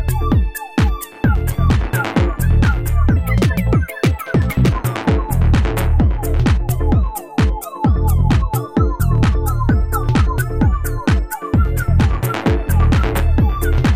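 Wrong sample rate from 3.16 s to 4.72 s: for this stretch the audio runs 1.5 times too fast and jumps about 7 semitones higher, with speed and pitch rising together by the same factor. That locked pairing points to samples being played back faster than they were captured, with no rate conversion, which fits material recorded at 32 kHz being played at 48 kHz. The sound sounds hurried and shrill until 4.72 s.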